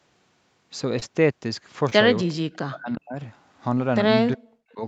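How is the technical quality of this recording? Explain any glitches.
The recording has two kinds of glitch: two brief smears in the first two seconds and two later stretches where the talker is pushed far down. The audio tops out at 8 kHz, consistent with a call's bandwidth.

Short concealed packet loss: at 0.99–1.03 s and again at 1.89–1.93 s the sound briefly smears and wobbles. Each time about 20 ms of audio arrived too late, and the receiver covered the gap by extending the preceding sound before blending back into the real signal.

Speech suppressed in double talk: from 2.34 to 3.18 s and from 4.34 to 4.82 s the voice drops away, by about 40 dB at its deepest. The likely cause is an echo canceller that, with both ends talking, could not separate this talker from loudspeaker echo and turned both down.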